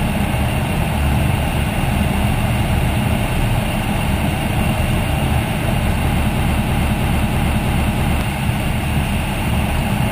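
Between 6.38 and 8.21 s, something in the playback or streaming chain likely stalled and kept resending its last buffered fragment, producing a broken-record loop: a 323 ms slice repeats exactly, six times back to back, and whatever should have played there is lost.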